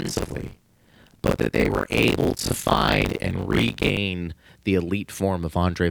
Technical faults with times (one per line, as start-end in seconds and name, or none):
0.00-3.97 buffer tearing